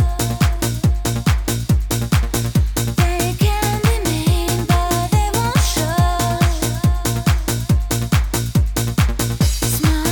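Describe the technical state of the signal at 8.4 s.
At 8.4 s the converter's sample clock is wandering, as it does throughout the clip: sample clock jitter of around 5 microseconds makes each sample land slightly early or late at random. The error follows the waveform's slope, leaving a rough, hissy layer roughly 25 dB below the signal. It swells on loud and high-frequency sound and drops away when the audio goes quiet.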